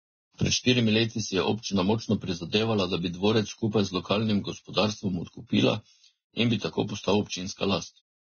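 From the start, heavy low-bitrate coding, likely Vorbis compression at a rate that fits roughly 16 kbps, has removed everything above 6.5 kHz and coarsely quantised the remaining treble. The speech sounds dull yet hissy and grainy, with roughened tones and blurred consonant attacks.

At 0.37 to 0.39 s, a transform block has spread its quantisation noise ahead of a sharp onset, producing pre-echo about 22 ms long. A brief hiss arrives just before the attack, which itself sounds softened and smeared.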